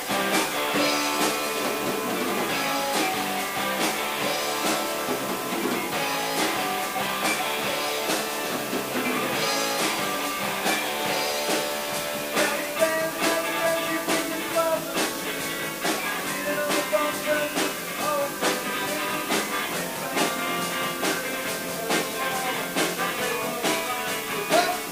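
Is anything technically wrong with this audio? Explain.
Yes. From start to finish a constant, even hiss sits only about 10 dB below the sound, with no grinding or crackle. This is low bit depth with dither. Noise added before rounding to very few levels, consistent with roughly 5-bit quantisation, turns the error into steady white noise instead of distortion.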